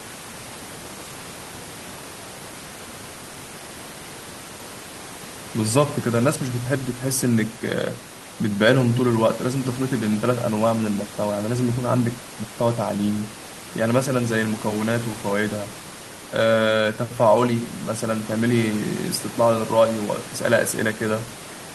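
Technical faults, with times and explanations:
No technical faults can be heard anywhere in this recording.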